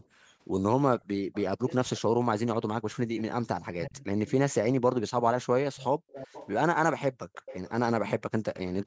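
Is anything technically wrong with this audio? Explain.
Yes, the audio shows three kinds of echo-canceller fault.

From 0.02 to 0.26 s the background is gated by the echo canceller. It clamped the microphone down by about 16 dB for roughly a fifth of a second while the far end played. Only the room sound dips and recovers, which separates it from double-talk suppression.

The speech is suppressed in double talk from 0.96 to 1.92 s and again from 2.55 to 6.36 s. The likely cause is that both ends talked at once and the canceller, unable to tell its talker from loudspeaker echo, pulled everything down, by as much as roughly 40 dB. Unlike a gated background, the speech itself dips, dulls and breaks into pieces, adding up to about half a second in the first stretch and about three seconds in the second.

There is echo leak at 1.33 to 2.0 s, 4.27 to 4.31 s, 6.09 to 6.51 s, 7.33 to 7.69 s and 8.55 to 8.85 s. 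A copy of the speech returns 373 ms late, likely from a loudspeaker whose microphone pickup was not fully cancelled. It sits roughly 15 to 35 dB below the speech, strongest around 7.33 s and weakest near 4.27 s. Its fixed delay marks it as echo rather than room reverberation.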